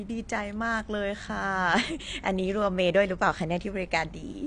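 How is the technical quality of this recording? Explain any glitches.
Technical quality is poor, with one fault across the whole speech recording. Throughout, plainly audible AAC compression damage, likely from a low bitrate around 32 kbps, dulls and smears the sound; a spectrogram shows nothing above 9.7 kHz.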